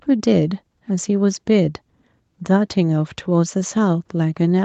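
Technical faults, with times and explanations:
No technical faults are present in this speech.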